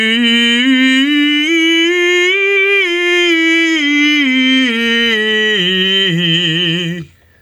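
Gain pumping runs throughout this music: the gain swings by roughly 15 dB, pulling loud and soft parts closer in level and squashing the sound, likely from excessive input gain driving a fast limiter.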